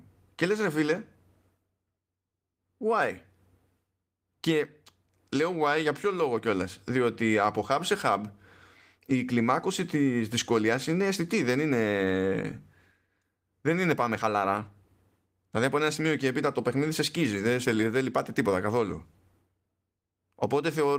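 Speech over Opus voice compression at 24 kbps, hybrid fullband, 20 ms frames; codec damage is light and no technical fault is present.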